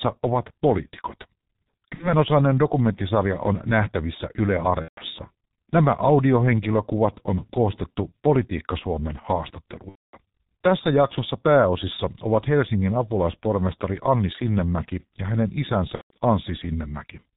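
Throughout, the G.723.1 codec's heavy damage is audible: nothing above 4 kHz, a hoarse, muffled tone and smeared consonants, which fits its 6.3 kbit/s mode. It is steady and uniform, unlike the brief, localized breakdowns that follow.

VoIP packet loss concealed by the speech codec strikes at 1.94 s (60 ms lost), 4.82 s (150 ms), 9.89 s (240 ms, the longest) and 15.95 s (150 ms). The decoder stretches its last pitch and filter into a fading buzzy tone or coloured noise, muting from the third lost frame in a row in the longer gaps, and the sound stays weak briefly after recovery.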